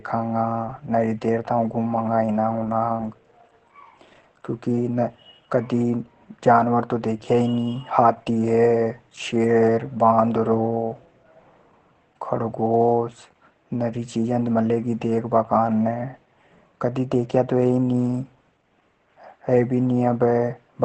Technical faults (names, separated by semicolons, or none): Opus voice compression